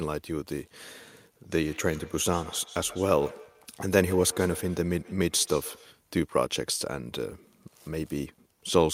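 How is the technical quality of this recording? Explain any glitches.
The recording has one fault: a feedback echo between two devices, from 1.63 to 5.99 s. A second device in the room plays back this microphone's signal, and the microphone picks it up again, which its own echo canceller cannot remove. As a result, the speech comes round again roughly every 150 ms, at most about 18 dB below the direct speech.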